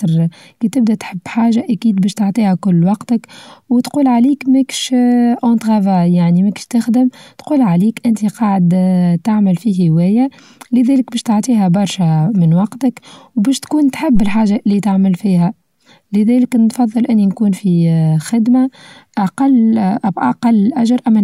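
A speech clip with one phantom power thump, from 14.15 to 14.48 s. It falls between "برشا من وقتك وبشوتكون" and "اللي تعمل فيها لذلك". A supply switching on a live input sends a step through the coupling capacitors. The result is a deep thump peaking near about -6 dBFS and decaying in about 73 ms.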